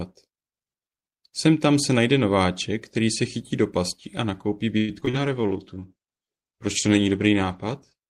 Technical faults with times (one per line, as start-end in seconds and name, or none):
4.77-5.15 repeated packet loss (robotic sound)
5.12-8.07 call bitrate drop
5.41-5.90 jitter buffer slow-down